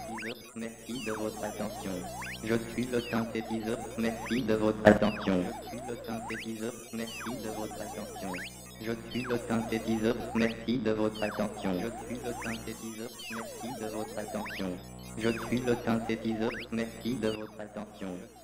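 A sudden gain jump at 4.87 s raises the level by about 12 dB for roughly 0.11 s, until 4.98 s. The sound and its background noise rise together, likely because a digital gain setting took effect between adjacent samples with no ramp. A second sudden gain jump at 17.36 s drops the level by about 11 dB and holds it there to the end. Again, sound and noise floor fall as one.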